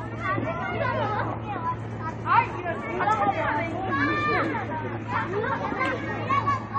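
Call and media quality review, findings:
Dull, band-limited sound with warbling, fizzy texture across the whole clip; plainly audible codec damage. Likely AAC compression (AAC-LC) at a low rate, which fits about 32 kbps. Encoder quantises each frame's frequency lines coarsely against its hearing model, dropping detail and starving upper bands. Spectrogram: hard ceiling at 9 kHz, nothing above; smeared, blocky texture below the cut-off.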